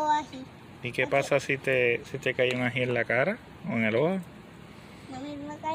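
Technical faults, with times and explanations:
No technical faults detected.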